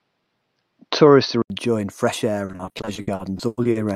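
A speech recording with two separate problems. From 0.0 to 1.5 s the sound is dull and boxy, with nothing above 6.1 kHz, a faint extra noise floor roughly 55 dB below the speech, and roughly the same overall level. An 80 ms silence at 1.5 s then gives way to fuller sound, which points to an input switched to a poorer device, likely a headset or secondary microphone, and then back. From 2.45 to 3.77 s there is repeated packet loss with robotic sound: more than a dozen dropouts, the longest 100 ms. About half a second of sound is patched by extending earlier audio, and about half a second is simply missing, so 38% of that stretch is concealed. The result is choppy, with pieces missing.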